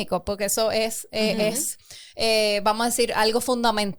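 No technical faults are audible.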